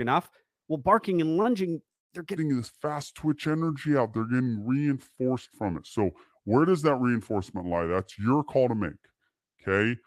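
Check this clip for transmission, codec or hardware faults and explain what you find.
Three faults are audible in this speech, two from late packet delivery and one from playback timing.

From 1.17 to 2.12 s there are repeated stalls (stutter). Packets kept reaching the receiver late, so its jitter buffer emptied six times, and each time the last sound was continued until data resumed. About 291 ms was filled this way, the longest gap 188 ms, roughly a third of that span, with nothing actually lost. The speech drags and catches, stuttering through that second.

From 2.37 s to the end, the section plays at the wrong speed, at 0.774 times its original rate, most likely because it was played against a mismatched clock. Because speed and pitch are tied together here, the speech becomes slower and sits about four semitones lower, giving it a deep, sluggish quality that continues to the end of the clip.

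From 5.16 to 5.19 s, inside that slowed section, there is a short stall from a late packet. Delivery delay jumped by 18 ms, the buffer briefly ran dry, and the receiver held the previous sound for 18 ms before continuing from the same point. No audio is lost, but one sound lingers slightly too long, with a faint buzz or dip.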